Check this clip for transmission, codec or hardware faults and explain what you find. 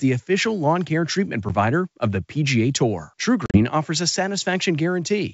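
Packet loss on an ADPCM call, at two points in this speech clip. At 1.49 to 1.51 s there is a brief 10 ms hard-edged gap, about one packet. From 3.46 to 3.60 s, 70 ms of silent holes are scattered across 80 ms, the longest 40 ms, with brief distortion as the speech returns. The lost packets are filled with silence. The decoder's adaptive predictor and step size drift from the sender's, so the sound briefly comes back wrong before it resyncs. The G.722 wideband coding itself is clean, consistent with 64 kbit/s.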